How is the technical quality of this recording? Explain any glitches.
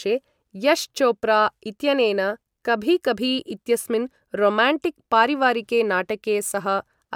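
No technical glitches can be heard anywhere in the recording.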